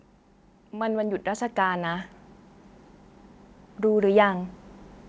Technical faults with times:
0.71-2.15 automatic gain rising
3.81-4.60 automatic gain rising

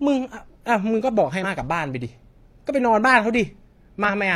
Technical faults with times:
1.40-1.44 damaged data in a compressed stream
4.04-4.10 damaged data in a compressed stream

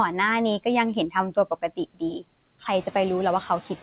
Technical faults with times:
0.00-3.82 noise suppressor artifacts
1.32-2.02 speech cut by the noise suppressor

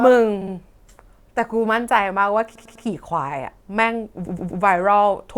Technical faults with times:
0.00-1.97 sample clock jitter
0.41-0.53 repeated frames
2.55-2.85 repeated frames
4.25-4.61 repeated frames

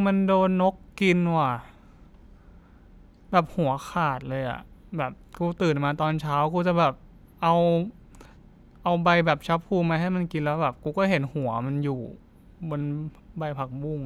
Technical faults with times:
4.99 dropped samples
7.87 dropped samples
10.55 dropped samples

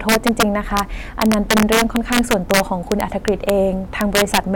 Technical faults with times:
0.00-4.56 integer overflow

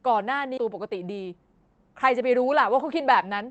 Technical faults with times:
0.57-0.59 skip ahead
0.69-1.61 jitter buffer speed-up

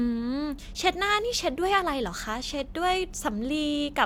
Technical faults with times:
none

